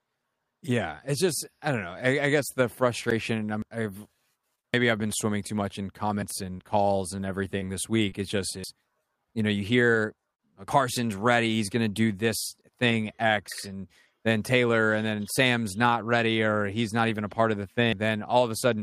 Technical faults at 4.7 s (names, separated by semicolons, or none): dropped buffer (overrun)